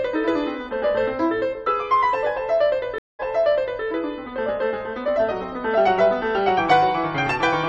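At 2.98 s the music cuts out for 0.2 s and returns 0.65 s earlier, replaying a passage: a stream reconnect, decoder restarting mid-stream.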